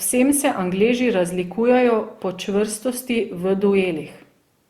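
All the way through, the speech has that swirly, hollow smear of generation loss, likely from being run through Opus at 64 kbit/s around four times, so attacks blur.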